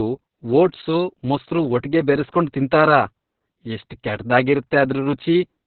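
Throughout the speech, Opus voice compression is heavy. Nothing sounds above about 4.3 kHz, a narrowband cut that fits the SILK coder at a very low rate, near 6 kbps. The coarse excitation makes the voice muffled, hoarse and slightly robotic.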